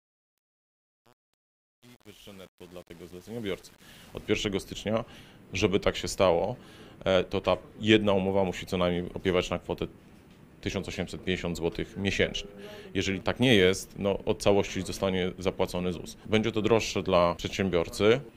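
From 0.0 to 4.28 s the fade shows truncation distortion on a fade. The gain stage keeps too few bits and adds no dither, which fits roughly 8-bit resolution, so the quiet end of the fade is gritty. On the waveform the low-level stretch appears as coarse square steps. The spectrogram shows broadband grainy noise tied to the signal.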